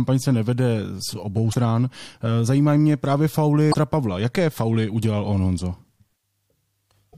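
At 1.50 to 1.55 s after "z obou", 3.70 to 3.75 s after "zajímají mě právě", and 7.09 to 7.15 s, damaged data in a compressed stream makes the decoder misread frames and lose sync, giving a brief glitch.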